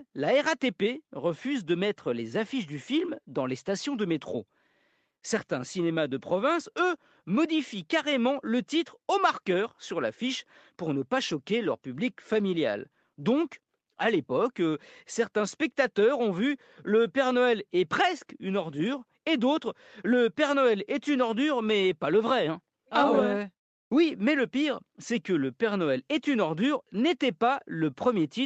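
No technical faults can be heard anywhere in the speech. It has clearly passed through a call's microphone processing, with the lowest bass trimmed and nothing above 8 kHz, as is normal for that path.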